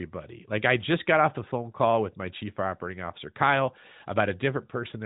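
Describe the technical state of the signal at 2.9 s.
At 2.9 s the audio is intact, with no fault, and only the expected narrowband band limit of the AMR narrowband mobile codec, with nothing above about 3.8 kHz.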